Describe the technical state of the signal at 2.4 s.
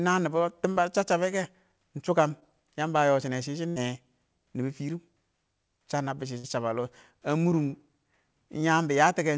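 A brief smear in the speech runs from 2.40 to 2.43 s, right after "kɛ ɪng shʊ kəm". This is short concealed packet loss: about 20 ms of audio arrived too late, and the decoder extended the preceding sound before blending back into the real signal. Around it the call audio stops at 8 kHz, which fits a wideband call codec.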